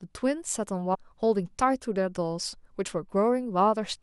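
At 0.93 to 0.96 s the speech is interrupted by a short blip caused by damaged data in a compressed stream. Corrupted bytes leave the decoder unable to read those frames correctly, so it loses sync and hunts for the next valid frame header.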